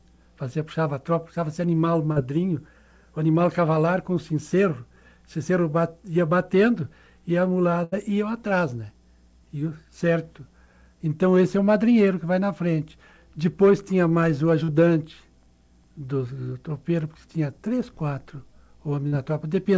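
At 2.12 s there is a short concealed packet loss. About 40 ms of audio arrived too late to decode. The receiver bridged the gap by extending the sound just before it, then blended back into the real signal. It comes across as a brief smear or wobble.

From 7.84 to 7.95 s comes a burst of packet loss. About 80 ms went missing in a row. The concealment carried the last sound forward while fading it down. The result is a held buzz or a dying hiss. Then the audio picks up further along, with that stretch skipped.

The same short concealed packet loss returns at 14.64 s and again at 19.08 s, each about 40 ms long. Both give the same quick smear. Throughout, the audio stops at 8 kHz, which fits a wideband call codec such as G.722 at 64 kbps.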